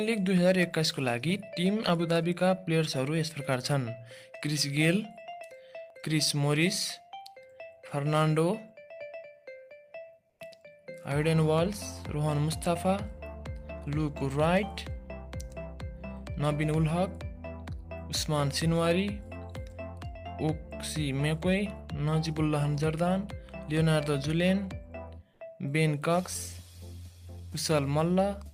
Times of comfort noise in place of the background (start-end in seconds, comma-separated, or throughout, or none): 10.29-10.39